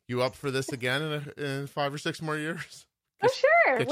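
No technical faults are audible anywhere in the speech.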